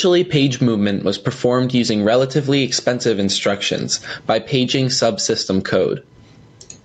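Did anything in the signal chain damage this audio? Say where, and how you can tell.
Yes. The damage runs through the whole clip, and it sounds like gain pumping. The level swing is large, around 20 dB. Loud and quiet passages sit unnaturally close together, so the speech sounds squashed. The likely cause is input gain set far too high, with a fast limiter or compressor clamping each loud sound. The band stopping at 8 kHz comes from the call path, not this fault.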